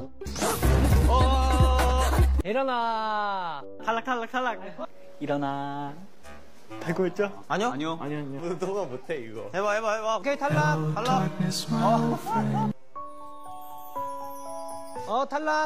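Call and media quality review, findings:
DC offset, throughout. No audible symptom; waveform sits off the zero line for the whole clip, with steady energy at 0 Hz, about -40 dBFS. Probable component: capture front end or converter, where a constant bias is added to every sample. Costs a little headroom and can click at edits or fades. Fix with a high-pass or DC-removal filter.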